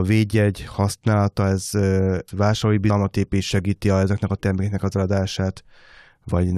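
Compressed frames skipped at 2.89 s, just before "épít segíti a ezeknek", and at 6.28 s: about four, then three whole frames (a 23.2 ms frame length) went undecoded, so the speech jumps ahead roughly 100 ms, then 70 ms, each with a brief smeared blip.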